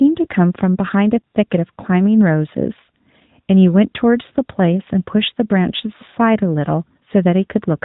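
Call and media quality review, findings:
AMR narrowband mobile codec, throughout: band-limited, nothing above 4 kHz, buzzy, synthetic timbre, plainly audible. Vocal-tract model with sparse pulse excitation per subframe; degree of damage fits a mid-rate AMR-NB mode near 10.2 kbps. Mobile leg, 8 kHz sampled.

Lost AMR speech frames, 1.20 to 1.23 s and 6.10 to 6.14 s: brief dip and warble, rough re-entry. Checksum-failed frames concealed by repeating last good pitch and spectral settings at decaying gain. First gap fits two 20 ms frames, second one frame.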